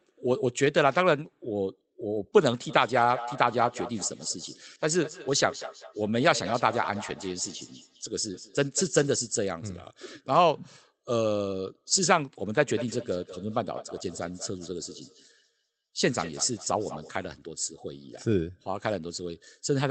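Feedback echo between two devices runs from 2.69 to 9.18 s and again from 12.53 to 17.12 s. Another device in the room replays the call, and its sound re-enters the microphone. The speech returns roughly every fifth of a second, thin and ringing, peaking about 13 dB and then about 17 dB below it.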